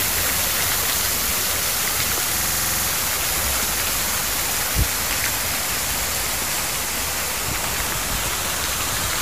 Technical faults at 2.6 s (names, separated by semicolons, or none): stuck bit; system hang loop